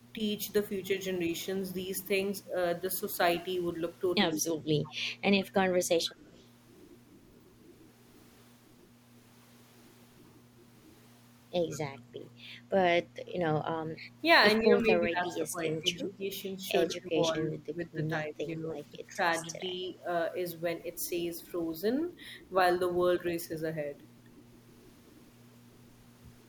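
At 4.32 s the speech suddenly sinks, by something like 20 dB at its deepest, for about a fifth of a second until 4.54 s. This is speech suppressed in double talk: with both ends talking at once, the echo canceller likely could not tell this talker apart from its loudspeaker echo, so it turned everything down together.

Overlapping that, from 4.34 to 5.53 s, a faint second copy of the voice trails the original by 140 ms, roughly 25 dB below it. Shorter scraps of the same delayed copy return from 6.25 to 6.45 s, fainter at roughly 35 dB down, and from 11.71 to 11.78 s, again roughly 25 dB down. This is echo leak, likely from a far end playing the call over a loudspeaker whose canceller left part of the microphone's pickup in place and sent it back.

At 13.12 s the room sound briefly dips by about 7 dB for roughly 40 ms, then comes straight back. This is background gated by the echo canceller, clamping the microphone hard while the loudspeaker played.

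Speech suppressed in double talk returns between 13.93 and 19.78 s. The voice repeatedly drops away, by roughly 15 dB at worst, adding up to around three seconds of dulled or broken speech, with one last brief dip of roughly 10 dB at 23.2 s. Here too the canceller likely confused simultaneous talk for echo.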